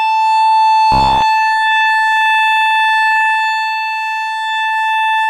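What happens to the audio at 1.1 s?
At 1.1 s you're inside a burst of robotic sound from repeated short buffers, running 0.92 to 1.22 s. The music turns into a stiff metallic buzz near 67 Hz, likely from a roughly 15 ms slice looping while most of the real audio got skipped.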